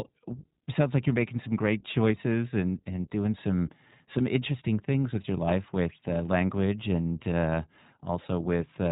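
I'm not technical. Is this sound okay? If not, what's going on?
No. Throughout the speech it sounds muffled, like a phone call, and slightly rough and synthetic. That is the iLBC codec, a phone-quality voice compressor that discards everything above 4 kHz and rebuilds the sound in short, separately coded chunks, likely 20 ms each.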